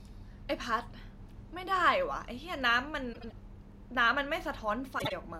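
At 3.13 s, frames out of order garble the speech until 3.32 s. Two neighbouring blocks of about 78 ms, which fits three frames each, play in swapped order. The result is a brief flutter. At 4.98 s it happens again, ending at 5.13 s. Here the swapped blocks are about 52 ms, which fits two frames each. Nothing is lost. The audio is only rearranged.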